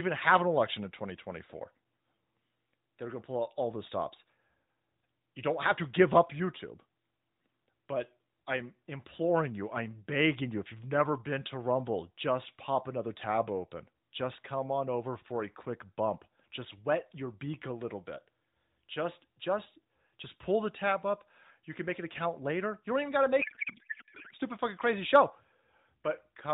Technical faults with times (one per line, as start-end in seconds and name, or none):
23.42-24.34 codec payload misread